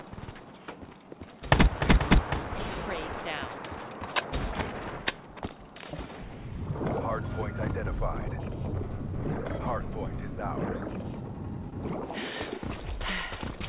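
At 11.70 to 11.73 s there is a short concealed packet loss. About 20 ms of audio never arrived in time, and the receiver patched roughly 14 ms of it by extending the preceding sound before crossfading back into the real signal. It is heard as a quick smear or wobble. On the spectrogram, the harmonics or noise texture look frozen for a sliver, all below the 4 kHz ceiling that points to G.711 A-law at 64 kbps.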